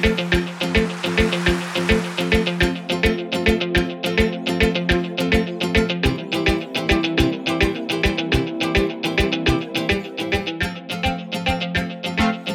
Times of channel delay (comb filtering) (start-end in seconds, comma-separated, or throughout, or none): 9.91-12.54